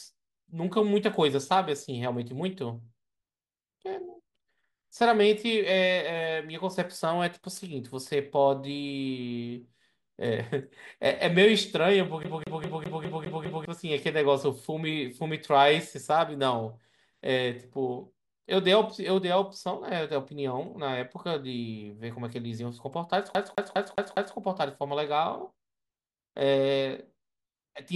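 At 12.23 s the speech catches on a CD stuck on one turn: one 203 ms slice plays seven times, each jump back marked by a brief mute, until 13.65 s. The same skip returns from 23.35 to 24.36 s with five repeats of a 203 ms slice. The identical slice length and the clean gap at every jump show a laser thrown back by a scratch, unlike a buffer glitch, whose repeats are irregular and buzzier.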